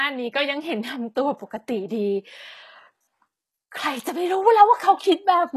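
Throughout, s sounds turn gritty and lispy with nothing above 12.3 kHz. The treble stays bright rather than dull, pointing to likely HE-AAC compression at a low bitrate near 16 kbps.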